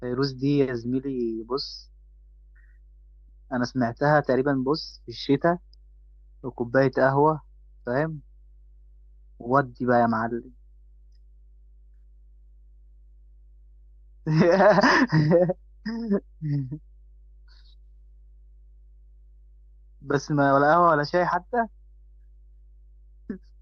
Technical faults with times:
0.00-23.62 mains hum

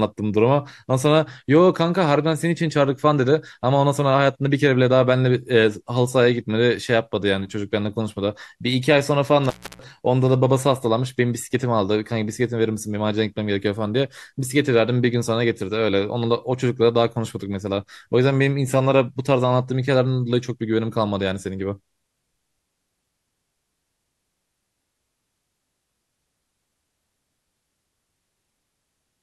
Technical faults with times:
9.45-9.84 intermittent contact

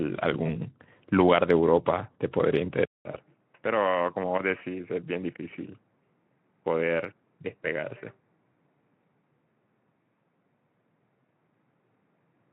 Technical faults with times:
0.43-0.49 VoIP packet loss concealed by the speech codec
2.85-12.53 input switched to a poorer device
3.11-3.19 VoIP packet loss concealed by the speech codec

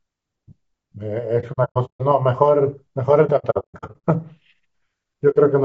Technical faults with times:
0.00-5.64 low-delay AAC compression
1.40-2.02 AAC frame loss with muting
3.26-4.01 AAC frame loss with muting
5.30-5.36 AAC frame loss with muting

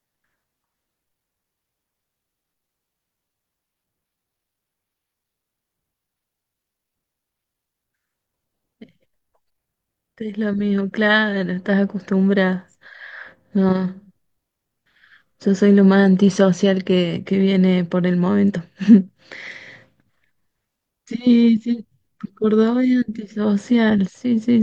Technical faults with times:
18.84-18.88 compressed frames skipped

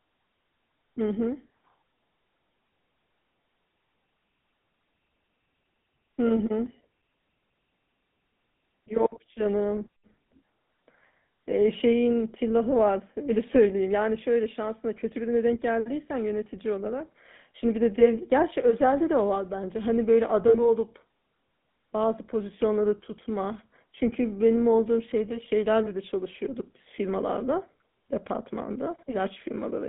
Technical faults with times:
0.00-29.88 GSM full-rate codec
20.48-20.56 lost GSM frames

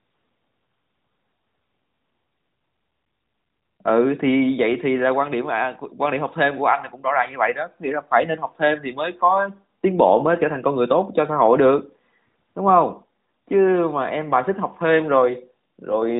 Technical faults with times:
none

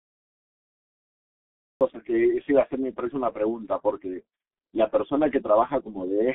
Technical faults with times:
0.00-6.34 G.723.1 codec
0.00-1.81 cut-off start

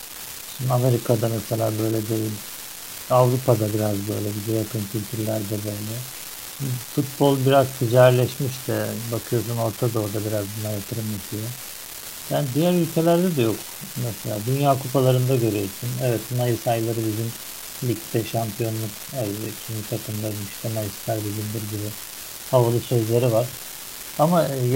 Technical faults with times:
0.00-24.76 unreliable data bit

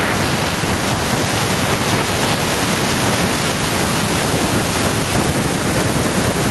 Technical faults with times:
0.00-6.51 gain pumping

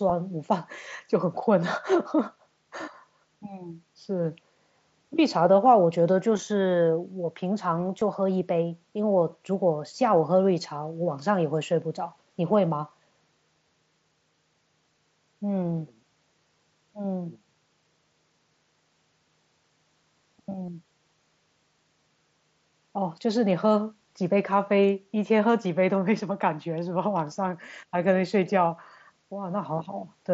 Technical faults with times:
6.38 concealed Bluetooth headset packet loss
8.01 concealed Bluetooth headset packet loss
20.66-20.68 concealed Bluetooth headset packet loss

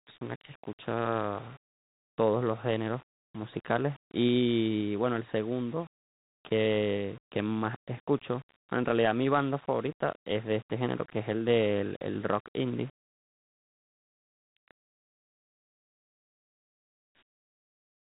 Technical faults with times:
0.00-18.15 low bit depth without dither

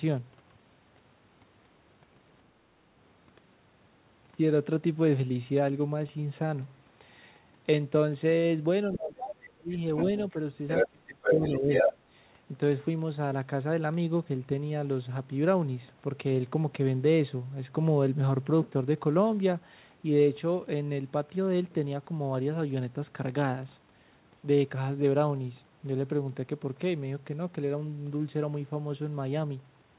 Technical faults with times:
8.92-9.69 speech suppressed in double talk
9.96-10.23 other side's voice leaking through
10.67-10.88 other side's voice leaking through
10.84-11.70 speech suppressed in double talk
11.22-11.97 other side's voice leaking through

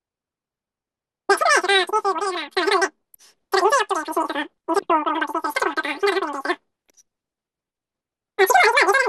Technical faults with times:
0.00-9.08 wrong sample rate

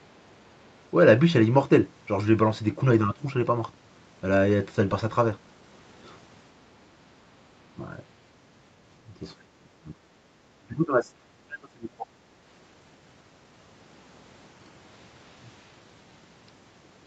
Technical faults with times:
3.05-3.23 speech suppressed in double talk
9.20-10.28 speech suppressed in double talk
10.57-12.08 speech suppressed in double talk

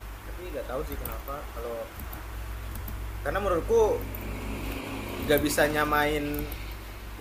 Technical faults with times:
none

